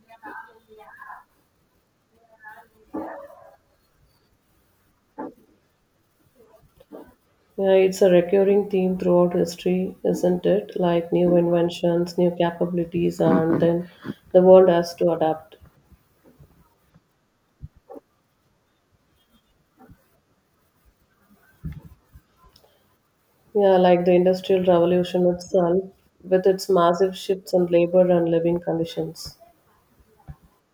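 No technical faults can be heard anywhere in the recording.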